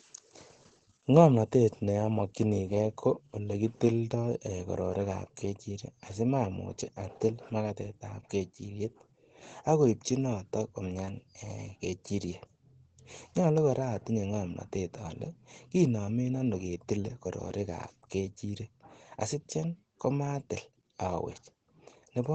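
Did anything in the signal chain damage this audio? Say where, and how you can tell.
Yes, at the codec stage. The whole clip carries Opus voice compression: the speech sounds muffled and a little hoarse and robotic from start to finish, and nothing sits above about 14.2 kHz. That texture comes from SILK's linear-prediction coding, which models the voice as a filter driven by an excitation signal and codes that excitation coarsely when bits are scarce. Damage this plain points to a low bitrate, around 12 kbps, with 20 ms frames.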